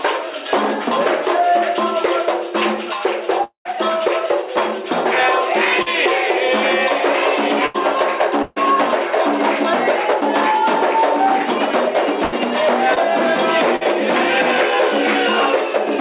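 A call recording with audio limited to below 4 kHz, which points to a narrowband G.711-style call path. From 3.44 to 3.77 s the sound turns into a fading buzz or hiss for about 210 ms, then about 110 ms of silence, and resumes later with roughly 220 ms missing. That is likely a long network dropout, where the receiver extended the last sound until it ran out. Brief smears at 5.82 to 5.88 s and 12.94 to 12.98 s, lasting about 40 ms and 20 ms, are short concealed packet loss: the decoder briefly continued the preceding sound and then blended back into the real audio. At 7.66 to 7.76 s, 8.42 to 8.58 s, 12.24 to 12.34 s and 13.76 to 13.83 s there are held, fading sounds of about 80, 140, 80 and 50 ms. These are bursts of packet loss, where consecutive packets were lost or arrived too late and the gap was bridged by stretching and lowering the last sound before playback jumped ahead.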